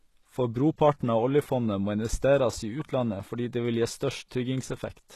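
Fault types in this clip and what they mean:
HE-AAC compression: The speech carries plainly audible codec damage throughout, most likely from HE-AAC at a low bitrate, something around 16 kbps. Only the lower spectrum is coded directly, and the treble is rebuilt by copying lower bands upward under a coarse envelope, so s sounds come out gritty, metallic or lispy. On a spectrogram the upper band looks like a smeared, repeated copy of the region below, with harmonics misaligned at the crossover and nothing above 12.3 kHz.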